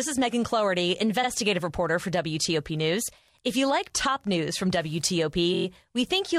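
A Wi-Fi radio sitting close to the recording chain in this speech clip had its transmissions rectified by the audio circuit. Its beacon, repeating every 102.4 ms, leaves a faint Wi-Fi interference tick about ten times a second, well below the speech, running from 0.62 s to 5.85 s. Separately, blocks of compressed frames were delivered more than once, so the decoder replayed short stretches and stretched the audio. These repeated frames appear three times. From 1.23 to 1.28 s a 46.4 ms block plays twice, adding 46.4 ms. At 3.95 s a 2.9 ms block plays three times in a row, a tiny catch adding 5.8 ms. From 5.53 to 5.65 s a 23.2 ms block is repeated five extra times, adding 116.1 ms and producing a stutter.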